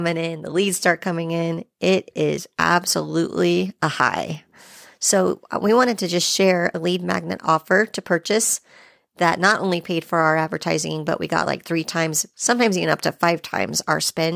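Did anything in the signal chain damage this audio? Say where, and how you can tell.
No, nothing in the chain has done any audible damage here; the speech holds together throughout with nothing that points to trouble at any stage.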